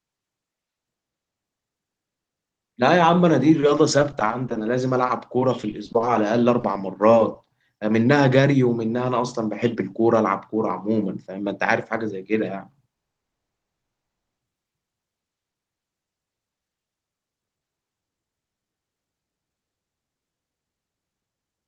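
Speech clip with a few network problems. From 3.60 to 6.16 s, and again from 6.60 to 7.46 s, there's repeated packet loss (robotic sound): dozens of tiny holes, none longer than 20 ms, each patched by stretching the last bit of audio, so it comes out choppy. Around 12.94 s there's a call audio freeze: the sound goes silent for about 0.15 s, then for another 1.27 s until 14.38 s, and picks up where it left off with nothing lost. That's likely the jitter buffer running dry while packets were held up. From 16.45 s to 21.62 s you get a jitter buffer speed-up: the receiver trims tiny pitch-period slices to cut the built-up delay, so the speech runs at about 119% speed at unchanged pitch, losing roughly a second overall and sounding hurried.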